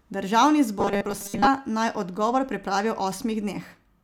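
From 0.79 to 1.48 s the speech goes robotic, a rigid metallic buzz at 200 Hz, likely from repeated short buffers, with most of the real audio skipped.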